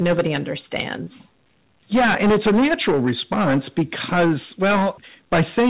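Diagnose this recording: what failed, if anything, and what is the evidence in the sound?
Hard clipping runs through the whole speech recording. Every loud syllable carries a harsh, gritty fuzz, and the peaks sound squashed rather than just loud. The signal was pushed about 15 dB past what a gain stage or converter could pass, so around a sixth of the samples hit the ceiling and were cut flat. Those flat tops add dense harmonics. Because the call path passes nothing above 4 kHz, the ones above that are cut off, leaving the rasp inside the narrow telephone band.

Short concealed packet loss shows up from 1.04 to 1.08 s. There is a brief smeared wobble where the sound briefly holds its last shape instead of moving on, then blends back into the real speech. This is a network fault. About 20 ms of audio, which fits one lost packet, never reached the receiver in time. The jitter buffer and decoder filled roughly 23 ms by extending the preceding sound and crossfading out.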